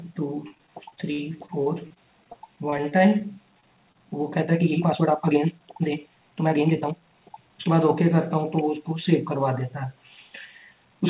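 From 0.48 to 3.22 s, repeated packet loss (robotic sound) left a run of gaps, the longest 57 ms. Each was patched by extending the preceding sound, so about 12% of that span is filled-in material, and the audio turns choppy with pieces missing.

Two short concealed packet losses follow, at 3.60 to 3.64 s and 3.92 to 3.97 s, each losing about 20 ms. The receiver bridged them by continuing the last sound before blending back, leaving a brief smear or wobble.

From 4.40 to 7.72 s the audio runs 1.71 times faster with its pitch unchanged, likely a time-stretched section where software dropped short pieces to shorten it. The pace jumps abruptly and sounds rushed.

Throughout, nothing reaches above 4 kHz, which fits a narrowband G.711 call path.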